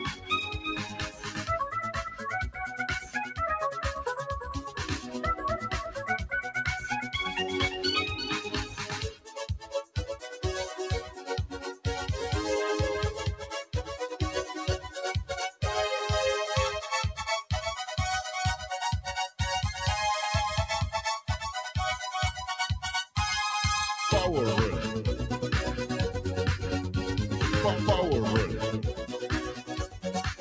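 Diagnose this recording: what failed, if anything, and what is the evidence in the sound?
In call processing, a speech-tuned noise suppressor stayed active on non-speech audio. Sustained material and decays are treated as noise, so the level pumps by roughly 10 dB.

The suppressor's sound cuts hit held passages hardest: 0 to 2.64 s, 3.0 to 3.36 s, 4.4 to 6.5 s, 8.45 to 10.38 s, 11.05 to 11.85 s, 13.41 to 13.74 s, and 29.53 s to the end. These dips reach about 16 dB.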